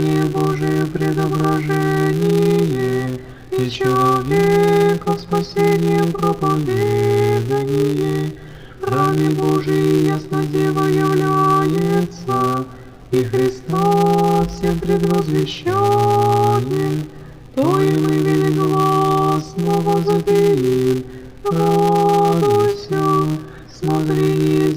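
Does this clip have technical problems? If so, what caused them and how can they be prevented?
Yes. A filter restarted on every block runs through the whole clip. It drops its stored state at each block boundary and starts again from silence. Each restart leaves a small transient. These repeat at 200 Hz as a steady buzz that rises and falls with the level of the sound. To prevent it, carry the filter's state from each block into the next instead of resetting it.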